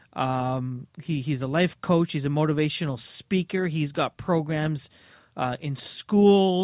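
No dropouts, glitches, level jumps or other transport faults can be heard anywhere in the recording.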